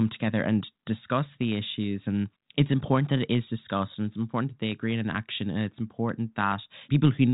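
Nothing stood out on listening to this speech, which carries the narrow telephone band of a G.726 ADPCM path with nothing above about 3.8 kHz.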